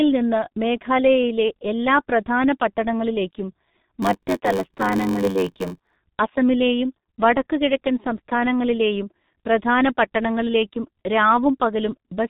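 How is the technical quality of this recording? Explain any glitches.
Technical quality is poor: heavy codec damage runs through the whole recording, and there is one timed glitch in the middle.

G.723.1 codec, throughout: this low-rate telephony coding, consistent with roughly 6 kbit/s, removes everything above 4 kHz, leaving speech muffled and hoarse with smeared consonants.

Block size mismatch (padded), 4.02 to 5.97 s, after "മേഘാലയയിലെ എല്ലാ പ്രധാന പട്ടണങ്ങളിലേക്കും": zero-padded short blocks, fitting a 512-sample read, add a 93.8 Hz buzz and slow playback to 0.861x with the timbre kept, until "അസമിലെയും വടക്കുകിഴക്കൻ സംസ്ഥാനങ്ങളിലെയും പ്രധാന".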